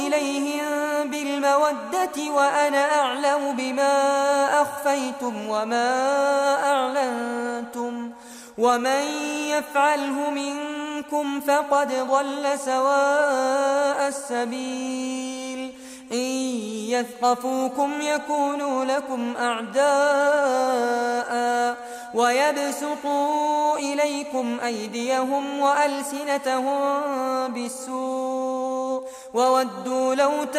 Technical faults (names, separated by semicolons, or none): none